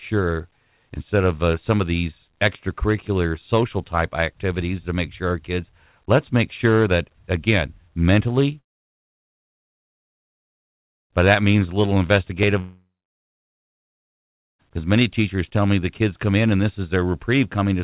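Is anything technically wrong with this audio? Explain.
Yes. Two long network dropouts break the speech, likely because packets stopped arriving and the receiver had nothing to play. From 8.6 to 11.12 s, right after "sure that again mentally", about 2.5 s is lost. From 12.60 to 14.61 s, just before "because many teachers tell", another 2 s goes missing. Each time the receiver briefly stretches the last sound into a fading buzz, then gives way to near silence: almost the whole first gap and most of the second. The speech resumes further on, with the missing stretch simply gone. Through the G.711 A-law call path, nothing is heard above 4 kHz.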